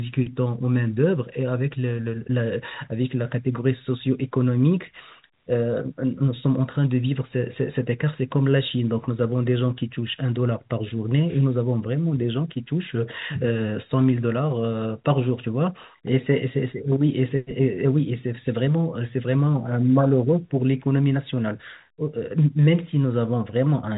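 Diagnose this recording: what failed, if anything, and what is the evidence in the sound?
Nothing in the chain has failed: the speech carries the ordinary band-limited character of G.711 telephone coding, with content stopping at about 3.8 kHz as that format requires, and no stage shows anything beyond that expected behaviour.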